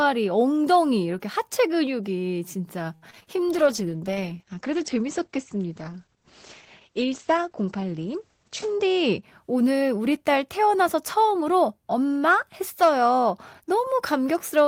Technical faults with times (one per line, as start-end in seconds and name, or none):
2.95-3.28 repeated packet loss (robotic sound)
3.48-9.29 call bitrate drop
8.39-9.31 jitter buffer speed-up